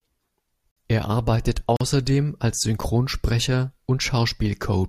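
At 0.71 s and again at 1.77 s the speech drops into hard-edged silence for about 51 ms and 41 ms, a gap between stream segments repeating one second apart. Segment timestamps misalign, so the player inserts silence. Waveform and spectrogram show clean blank vertical strips.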